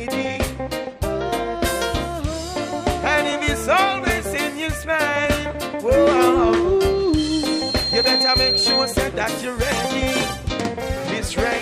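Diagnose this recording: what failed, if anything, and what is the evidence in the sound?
Loudspeaker feedback squeal in the analogue acoustic loop: from 6.87 to 9.08 s a 4.2 kHz tone swells, a brightening spectrogram line, as loop gain exceeds one.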